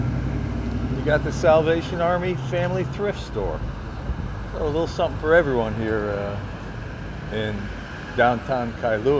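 No technical faults are audible anywhere in the recording.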